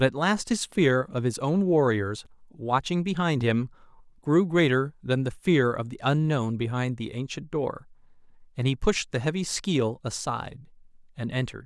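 At 2.25 s the speech drops out into a block of digital silence. For about 5.8 ms the audio cuts out. The waveform drops straight to silence and straight back, with no fade on either side. The gap is too short to hear as a hole. It comes across as a tick or dip laid over the speech.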